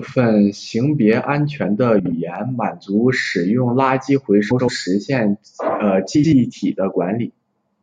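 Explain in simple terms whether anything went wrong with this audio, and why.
Frames out of order at 1.99–2.13 s, 4.50–4.69 s and 6.15–6.33 s: two neighbouring chunks of speech arrived swapped and played in that order, causing brief garbled flutters.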